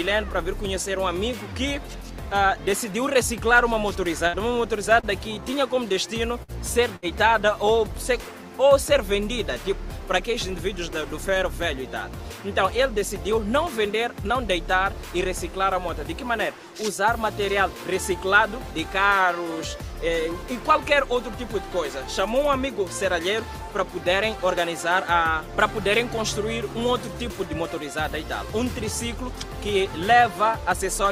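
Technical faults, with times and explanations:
4.27–4.36 s: burst of packet loss. About 60 ms of audio is gone; the receiver held and faded the last sound for 58 ms, then resumed further on.
5.00–5.06 s: short stall from a late packet. The jitter buffer ran dry, so the last sound was stretched 32 ms until the packet arrived, adding 32 ms delay without losing audio.
6.43–6.51 s: burst of packet loss. Concealment held and faded the last sound for 53 ms before playback resumed, skipping about 60 ms.
6.96–7.05 s: burst of packet loss. A 62 ms fading hold covers the gap, after which the audio picks up again with about 60 ms missing.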